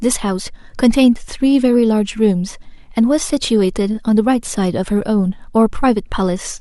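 No audible technical faults anywhere in the recording.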